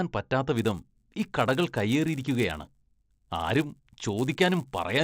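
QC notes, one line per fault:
0.55–5.03 s, resampler restarted on every block: each 10 ms block was converted from 16 kHz to 48 kHz in isolation, leaving an error at every edge. This produces a 100 Hz buzz present only under speech, seen as vertical stripes every 10 ms on a spectrogram.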